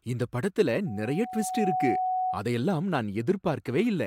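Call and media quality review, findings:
Loudspeaker feedback squeal, 0.86 to 2.44 s. Steady 742 Hz tone swells over about a second to roughly speech level. Mic is hearing its own speaker, and the loop gain tops one at that frequency. Check speaker gain and mic placement.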